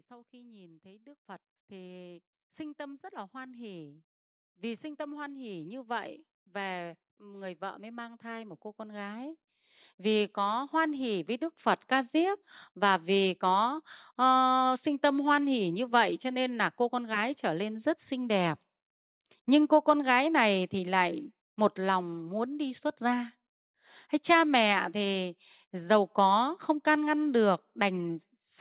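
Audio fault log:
0.07–13.36 s, automatic gain rising: the speech and the background noise beneath it swell together in a slow, steady climb of about 22 dB, with no jump at any point. The gain control heard a quiet input and kept raising its gain over those thirteen seconds, so the noise floor grows along with the voice. The call path's narrowband sound, with nothing above 4 kHz as fits G.711 mu-law, stays the same throughout the rise.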